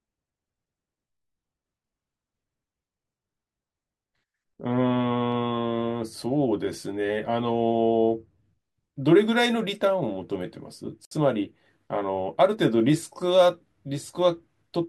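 At 11.05 s the speech halts for 62 ms, to 11.11 s. This is a gap at a join of encoded pieces, where encoder start delay and final-frame padding were left untrimmed. Unlike a dropout, nothing is lost. The sound resumes where it stopped, its edges smeared.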